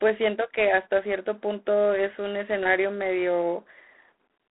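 From start to finish the speech carries G.726 ADPCM coding damage. The codec sends only a few bits per sample, coding the difference from a running prediction. Too few bits leave a coarse quantising error. Here it is a harsh, rasping hiss that swells and fades with the speech level. The grit fits the 24 kbit/s mode. The sound sits in a telephone band of 250 Hz to 3.5 kHz, with nothing above 3.9 kHz.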